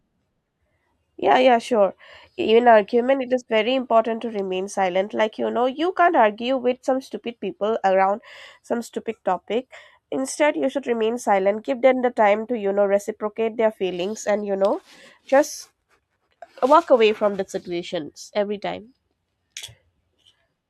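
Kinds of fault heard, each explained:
Nothing to flag in this speech recording, as no technical faults turn up anywhere in it.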